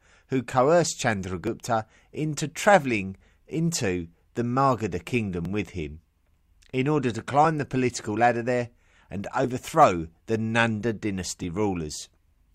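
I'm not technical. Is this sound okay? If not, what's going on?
No, there are two tiny skips. At 1.47 s, right after "who coerced", and at 5.45 s, just before "with him", you'll hear the speech jump slightly. That's an overlap between stream segments: two chunks of the stream claimed the same moment, so the player trimmed a sliver of real speech.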